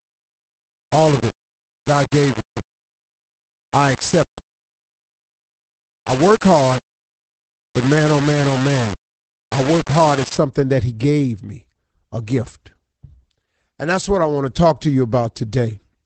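From 0 to 10.38 s, the signal was likely reduced to very few bits, which fits 4-bit rounding without dither. The speech turns coarse and grainy, with distortion about 15 dB below the signal.

Throughout the clip, Opus voice compression in its SILK speech mode, at a rate that fits about 12 kbps, leaves nothing above 8.6 kHz. Speech sounds dull, hoarse and faintly robotic.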